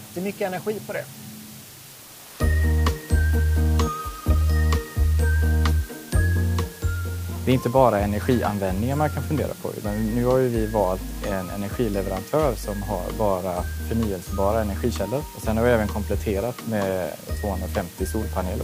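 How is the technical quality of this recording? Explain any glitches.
The recording has one fault, low bit depth with dither, present for the whole clip. The audio is carried at only 7 bits, and dither noise is added before each sample is rounded to that coarse grid. Instead of producing distortion that tracks the signal, the rounding error is spread into steady white noise. The result is a constant, even hiss sitting only around 20 dB below the signal.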